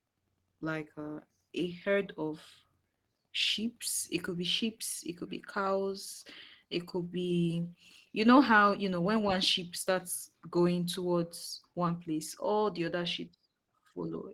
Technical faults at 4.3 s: none

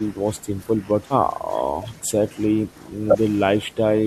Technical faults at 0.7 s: background gated by the echo canceller

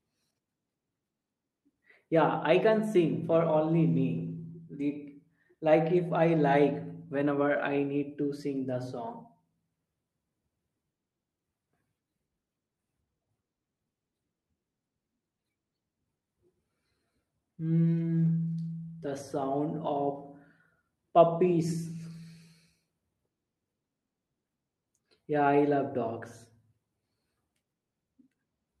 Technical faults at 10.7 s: none

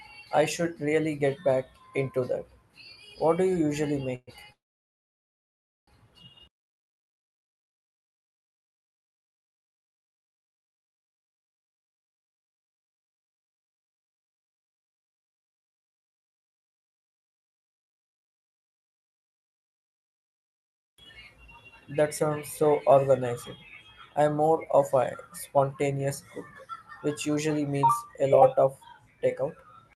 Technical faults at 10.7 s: none

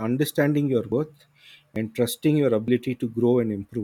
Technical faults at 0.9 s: dropped buffer (overrun)

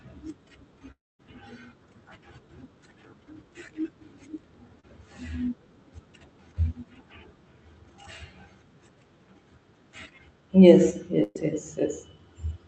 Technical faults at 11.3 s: burst of packet loss

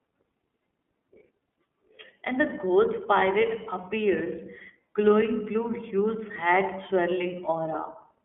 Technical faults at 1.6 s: iLBC codec

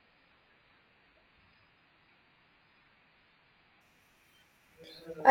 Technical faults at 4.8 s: none

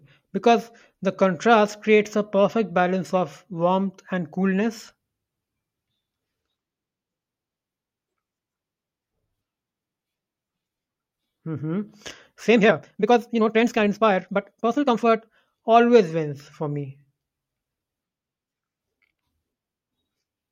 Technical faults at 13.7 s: time-stretched section

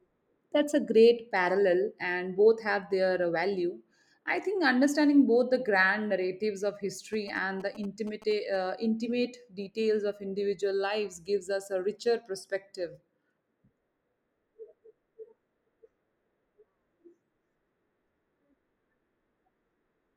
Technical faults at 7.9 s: GSM signalling bursts

